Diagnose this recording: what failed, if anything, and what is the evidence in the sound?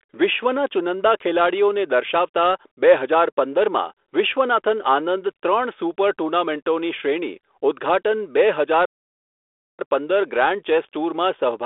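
A playback stall cuts the speech off mid-flow at 8.85 s, leaving silence for about 0.94 s until sound resumes at 9.79 s. This points to the playback stage, most likely a player buffer underrun or a blocked output thread. The telephone-band G.726 coding, limited to 300 Hz–3.5 kHz, continues on either side.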